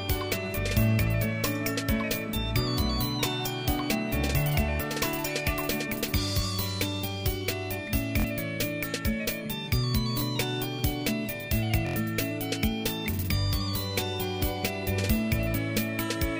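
Repeated buffers occur at 8.20 to 8.24 s, 10.19 to 10.22 s and 11.87 to 11.96 s. Each time, fresh audio failed to reach the output, so the last block of about 23 ms, which fits a 1024-sample buffer, was played again: twice more, once more, then four more times. The hard joins produce a brief buzzing stutter, longest at 11.9 s, and roughly 50, 20 and 100 ms of sound go missing.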